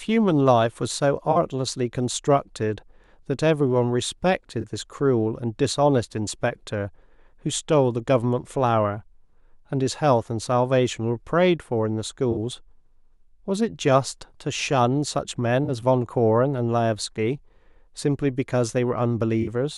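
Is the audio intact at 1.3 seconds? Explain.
No. A corrupt frame was concealed: damaged AAC data from 1.31 to 1.37 s, likely two frames, was patched by the decoder.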